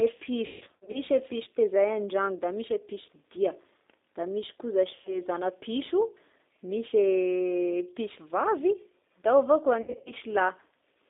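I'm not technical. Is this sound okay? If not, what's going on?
No. Two things are wrong with this speech recording.

G.729 codec, throughout: the call was squeezed through G.729, a low-data phone codec. Rather than sending the actual sound, it sends a rough description of the voice and rebuilds it at the other end. High sounds are also cut off, so the whole clip sounds narrow, like an old phone line, with a clearly rough, slightly robotic edge.

VoIP packet loss concealed by the speech codec, at 0.46 to 0.99 s, 4.96 to 5.20 s and 9.82 to 10.13 s: pieces of the call went missing in transit. To fill each gap, the decoder kept repeating and stretching the last bit of voice it had, fading it out. The first stretch is the worst, with gaps scattered over half a second. At those moments the voice turns buzzy or smeared, then sounds weak or distorted for a short while after the audio comes back.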